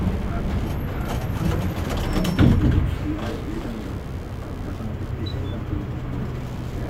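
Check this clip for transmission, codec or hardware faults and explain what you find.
One hardware fault runs through the whole clip. Computer activity noise is present throughout: processor, graphics or mouse load shifts the shared audio ground, adding a chirping buzz pulsing around 70 Hz, roughly 30 dB below the sound.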